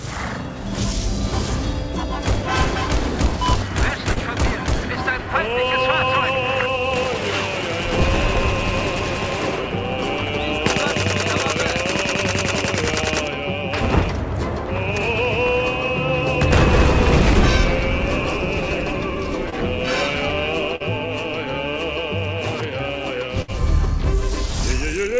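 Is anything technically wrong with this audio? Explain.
Yes, there are packet-loss dropouts, heard through a call path whose spectrum stops sharply at 8 kHz.

Short concealed packet loss occurs at 4.12, 19.50 and 20.76 s. Gaps of about 20 to 40 ms were filled by continuing the preceding sound. They are heard as brief smears or wobbles and appear as short, overly regular waveform patches.

A burst of packet loss at 23.42 to 23.50 s removes about 60 ms. Concealment holds the last sound while fading it, which shows as a smeared, decaying band on the spectrogram before the audio resumes further along.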